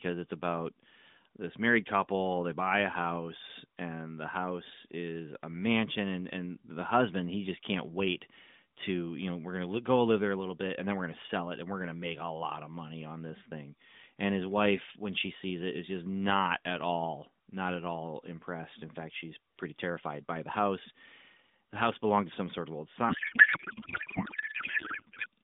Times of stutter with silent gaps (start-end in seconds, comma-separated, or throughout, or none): none